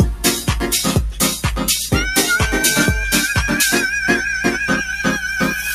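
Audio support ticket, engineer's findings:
Speech-tuned noise suppressor left active on non-speech material, whole clip. Treats sustained tones, ambience and reverb tails as noise and pulls them down, so attacks pass while held sound sinks. Gain swings around 5 dB, giving audible pumping and a thinned, fluttering body.

GSM phone buzz, 2.23 to 3.04 s. A 2G handset near the audio path is transmitting in call mode, and its RF bursts are being rectified in the analogue circuitry. The result is a hard, raspy 217 Hz buzz with dense harmonics, about 20 dB below the signal, steady throughout the burst and unrelated to the programme.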